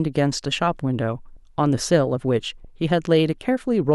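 At 1.36 s and again at 2.64 s the speech lurches forward with a short smeared blip rather than a sharp click: compressed frames skipped. Each time about one 26.1 ms frame goes unplayed, so roughly 30 ms of audio vanishes, and overlapping neighbour frames blur the join.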